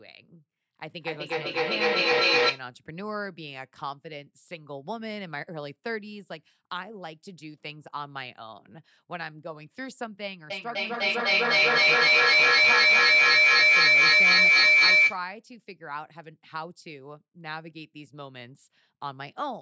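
Feedback echo between two devices runs from 0.89 to 2.69 s. A second device in the room replays the speech into the first microphone, whose echo canceller ignores it. Each word returns roughly every third of a second, thinner and ringier, peaking about 12 dB above the speech.

Feedback howl takes over from 10.5 to 15.26 s. The same loop now gains level on every trip, so the repeats grow and narrow to a whistling tone near 2 kHz, with the loop coming round roughly every third of a second and reaching about 16 dB above the speech.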